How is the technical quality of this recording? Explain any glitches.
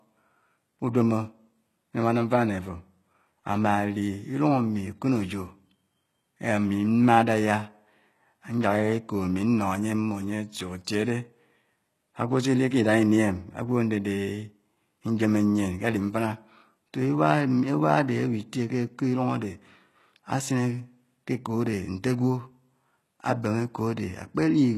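The recording has audible compression damage from start to finish. The likely cause is HE-AAC compression at a very low rate, consistent with something around 16 kbps. Only the lower spectrum is genuinely coded; everything above the crossover is synthesised by copying lower bands upward and fitting them to a coarse envelope, with nothing at all above 12.3 kHz. Because that rebuilt treble is not the original, sibilants in the speech come out gritty, metallic or lispy rather than crisp.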